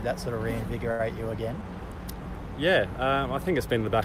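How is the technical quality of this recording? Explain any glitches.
There's one glitch worth flagging. At about 0.91 to 1.01 s there's a short stall from a late packet: the jitter buffer ran dry, so the sound got stretched for roughly 78 ms, then picked up where it left off. It comes across as a brief held smear with a slight buzz or dip, and nothing's actually lost.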